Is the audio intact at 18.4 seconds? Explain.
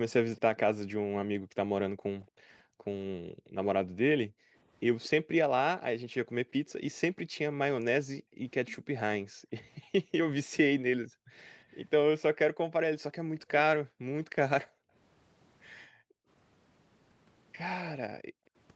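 No. From 18.2 to 18.51 s the background is gated by the echo canceller, which turned the microphone down by about 40 dB while the loudspeaker played. Room tone drops out, leaving a near-flat waveform and a dark vertical gap on the spectrogram.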